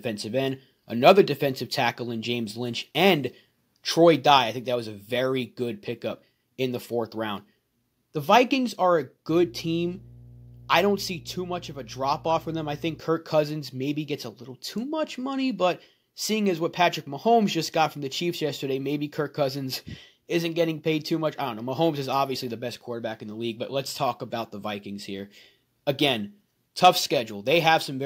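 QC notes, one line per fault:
1.07–1.11 s and 26.84–26.88 s, microphone overload: two brief bursts of harsh, crackling distortion, each about 40 ms long, on the loudest peaks of the speech. The waveform tops are flattened about 2 dB beyond the converter's limit, affecting only a small fraction of samples, so the damage is short but audible as a gritty edge. The likely cause is input gain set high enough that peaks hit the converter's ceiling.
4.38 s, microphone volume stepped down: the speech and the background fall in level together, abruptly, by about 3 dB in a single step rather than a smooth fade. It comes a few seconds after the first distorted peak, and the likely cause is call software detecting the hot input and lowering the device's input volume.
9.29–13.0 s, mains hum: a steady low tone at 60 Hz with some low harmonics sits under the speech for about 3.7 s, roughly 15 dB below the signal. 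It points to power-line coupling into the signal path, typically a ground loop or a nearby transformer, and it stops at 13.0 s.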